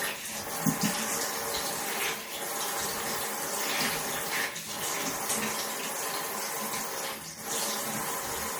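From start to finish the audio has a watery, swirly quality, with the top end shaved off and faint detail flickering in and out. That points to MP3 compression, likely at a low rate, something like 64 kbps, where the encoder starves quiet frequency content and blurs sharp onsets.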